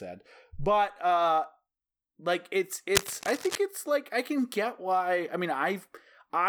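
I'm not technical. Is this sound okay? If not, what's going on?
No. There's cable scratch noise from about 2.95 to 3.58 seconds, just after "like it's" and ending before "it's like I can". For roughly two thirds of a second, a rough scratching, rustling burst sits over the speech, nearly as loud as the talking itself. It's likely caused by a worn cable, plug or knob being moved: the metal contact inside briefly connects and disconnects many times, and each flicker adds crackly noise.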